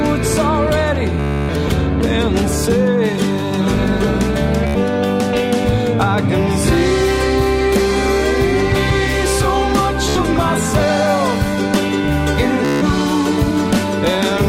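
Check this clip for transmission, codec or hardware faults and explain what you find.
The clip has one kind of fault: Bluetooth stutter, occurring four times. It appears at 1.20 to 1.50 s, 4.67 to 4.78 s, 10.09 to 10.17 s and 12.65 to 12.83 s. Packets arrived late or not at all. The receiver kept replaying its last short slice until fresh data came. The repeat period fits a slice of about 14 ms. Each run is heard as a rapid buzzing stutter. The longest lasts about 0.3 s. The sound then jumps ahead, with that stretch missing.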